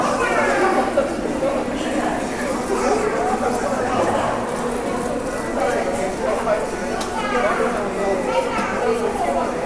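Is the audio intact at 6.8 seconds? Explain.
Yes, at 6.8 s the audio is intact, with no dropout, click, distortion or other fault at that point.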